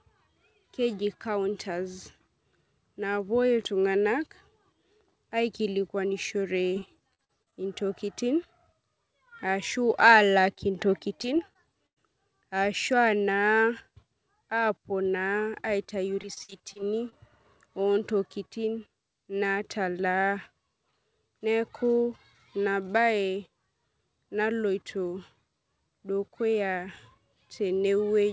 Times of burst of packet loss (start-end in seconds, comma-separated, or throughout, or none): 11.87-11.98